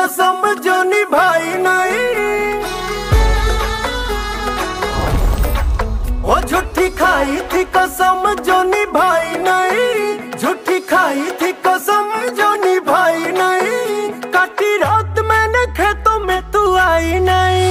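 No technical faults can be heard anywhere in this recording.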